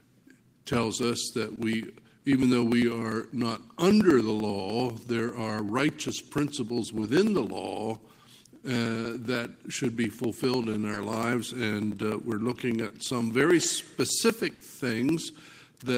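Around 1.55, 7.00, 10.94 and 12.88 s there's short concealed packet loss: 20 ms never arrived each time, so the receiver carried the last sound across the gap, leaving a quick smear or wobble. At 14.54 s a burst of packet loss takes out 60 ms; the fill fades into a dying buzz or hiss before the audio jumps ahead.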